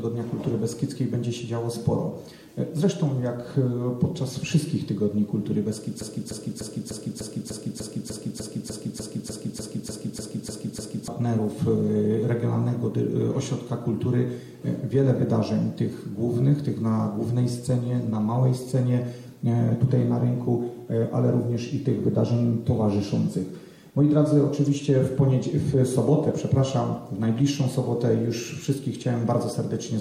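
The audio has one clear fault, a broken-record loop. From 6.01 s to 11.08 s, a fragment about 0.3 s long repeats exactly, back to back, 17 times. Each repeat is identical, so the sound stutters in a fixed cycle for about five seconds. Whatever should have played in that span is gone. The likely cause is a player, encoder or stream that stalled and kept resending the last piece it held.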